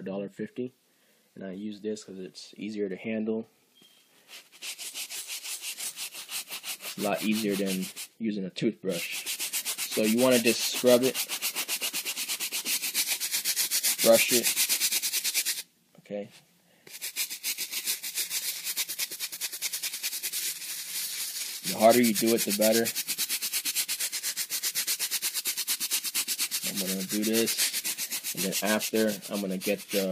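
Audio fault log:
No faults can be heard anywhere in this audio. The log has nothing to record at any point.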